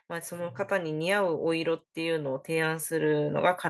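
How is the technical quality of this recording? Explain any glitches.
The level keeps climbing. From 0.29 s to the end, the speech and the background noise swell together, steadily louder. That is automatic gain rising: the automatic gain control judged the input too quiet and kept raising its gain, lifting everything it picks up.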